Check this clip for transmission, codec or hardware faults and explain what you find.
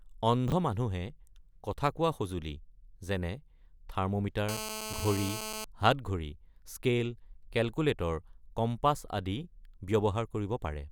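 Two kinds of fault are audible: audio chunks played out of order, twice, and a GSM phone buzz.

Chunks out of order at 0.48 to 0.52 s and 4.94 to 5.02 s: a 20 ms chunk arrived late, by one chunk at first and by three chunks later, so it plays after its successors. Nothing is lost, but the hard joins produce a brief jumbled stutter in the speech.

GSM phone buzz from 4.49 to 5.65 s: a nearby 2G phone on a call transmits in bursts 217 times a second, and the audio circuitry rectifies them into a hard, raspy 217 Hz buzz rich in harmonics. It stays steady and sits about 7 dB below the speech.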